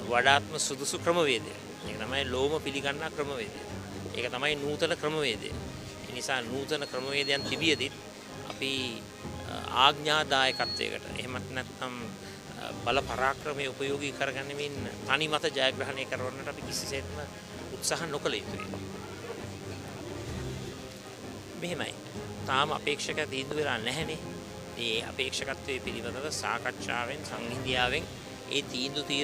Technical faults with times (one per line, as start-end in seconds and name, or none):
0.00-29.23 DECT cordless phone buzz